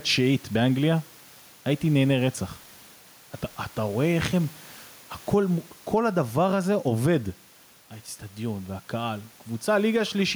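A speech recording with gain pumping running through the whole clip, with the level swinging by around 10 dB. The room noise sits about 33 dB below the speech. The likely cause is a microphone gain set far too high, with a fast limiter or compressor clamping down on every loud syllable. On a waveform the speech peaks look flattened to a near-uniform height while the gaps visibly fill with rising noise. A spectrogram shows the broadband noise floor brightening between phrases and dimming under them.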